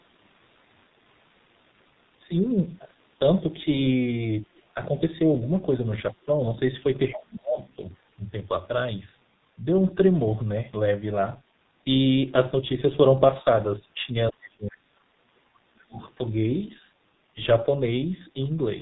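A G.723.1 codec running at 6.3 kbit/s encodes this speech throughout, in 30 ms frames with a slowly updated voice model and nothing above 4 kHz. The heavy damage makes the voice muffled and hoarse, with consonants smeared together. Between 7.59 and 7.73 s, the other side's voice leaking through appears as a faint scrap about 25 dB below the talker, likely because the echo canceller left part of the loudspeaker playback in the microphone signal. From 14.3 to 15.11 s and again from 15.58 to 16.01 s, the speech is suppressed in double talk: the talker's voice sinks by around 35 dB, likely because both sides spoke at once and the echo canceller turned everything down rather than pass echo.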